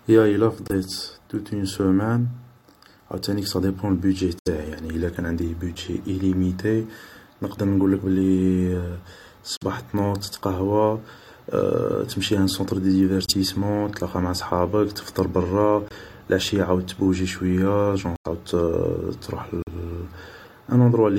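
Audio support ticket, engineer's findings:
Corrupt frame muted, seven events in the speech. Damaged compressed frames rejected by the decoder, and the player substituting silence. Abrupt dropouts at 0.66–0.75 s before "توت اون سومان", 4.39–4.47 s, 9.57–9.63 s before "تنوض تتقهوى", 13.26–13.33 s, 15.88–15.92 s between "معا صحابك تفطر برا" and "لعشي عاود تبوجي شوية", 18.16–18.27 s, and 19.62–19.68 s. Gaps of 40–110 ms, consistent with two to four codec frames. Timing intact, no drift after each hole.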